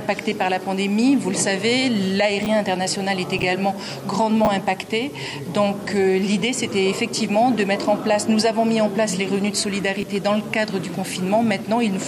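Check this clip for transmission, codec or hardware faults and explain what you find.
One fault type is present: chunks out of order, at 2.43–2.46 s, 3.39–3.43 s, 4.45–4.47 s and 10.00–10.03 s. A 10 ms chunk plays late, behind the next two, three, one and two chunks respectively. Nothing is lost. Each reordering leaves three hard joins, heard as a brief jumbled stutter.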